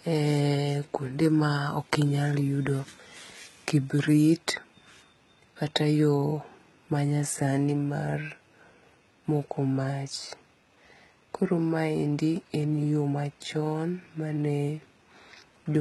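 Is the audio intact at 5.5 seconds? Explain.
No. HE-AAC compression runs throughout, including 5.5 s: the treble, cut off above 11.8 kHz, is likely rebuilt from copied lower bands, making s sounds gritty and lispy.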